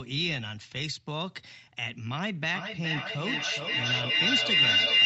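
Speech carried over an Opus call path, with content reaching up to 8 kHz. From 2.55 s to the end a feedback howl builds: two devices share the room, and each loop pass gains level. It narrows to a tone near 3 kHz, with the loop repeating roughly every 400 ms and peaking about 10 dB above the speech. A spectrogram shows a thickening bright horizontal band, and the waveform envelope swells.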